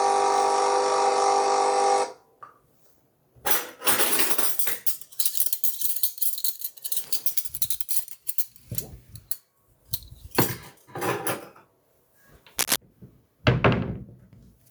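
A recording of sounds, with gain pumping running through the whole clip. The gain swings by around 15 dB, which leaves loud and quiet events squashed close together. The likely cause is input gain set far too high, with a fast limiter or compressor clamping down on each peak. There is also cable scratch noise from 12.59 to 12.76 s: a dense, uneven burst of scratchy rustling, roughly as loud as the sound itself. It is likely a worn cable, connector or control being moved, with contact resistance fluctuating quickly. Its irregular, gritty texture lasts a fraction of a second, which separates it from isolated clicks or a steady crackle.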